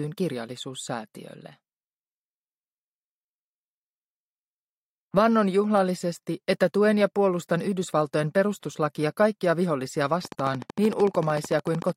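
From 10.25 to 11.90 s, a train of clicks ticks steadily at 13.4 per second, likely interference. It shows as regularly spaced vertical spectrogram lines and sharp waveform spikes.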